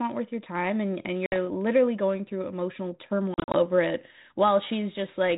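Packets drop out of the ADPCM call twice, and each time the decoder's adaptive predictor and step size lose track of the sender's, so packet loss on an ADPCM call shows up as hard-edged silent holes followed by speech returning slightly distorted for a brief moment. At 1.26 to 1.36 s a few packets vanish, about 60 ms in all. From 3.34 to 3.56 s roughly seven go missing, 120 ms scattered across 200 ms in runs of up to 40 ms, so the sound stutters over the light 32 kbit/s G.726 texture.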